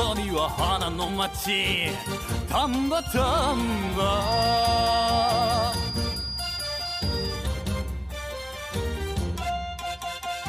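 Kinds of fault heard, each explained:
Feedback whistle: A thin, steady tone near 4.8 kHz sits behind the sound from 4.18 s to 7.46 s. It stays a little below the main signal and swells and fades slowly in level. It never builds into a howl. The likely cause is a loop from loudspeaker back into microphone, held just at the edge of feedback. At that edge, one high frequency keeps ringing on its own without growing.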